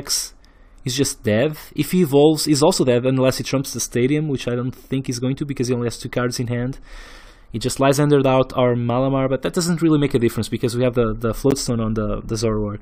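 At 11.51 s there is a gap between stream segments: the time stamps of two consecutive segments, which fits a 4-second segment length, fail to meet, and the player pads the shortfall with silence. The result is a hard-edged dropout of about 13 ms, with nothing missing from the sound itself.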